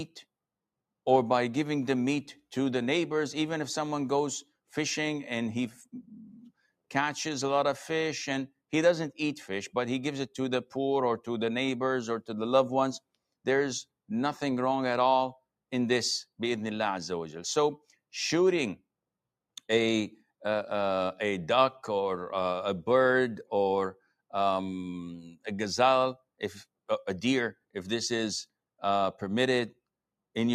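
At 25.29 s the noise suppressor misjudged part of the wanted signal as background noise and applied heavy gain reduction to it, so this is sound cut by the noise suppressor. For about a sixth of a second, until 25.46 s, the level sinks by as much as about 20 dB. Sustained or decaying content in that stretch dips sharply and has its tail clipped.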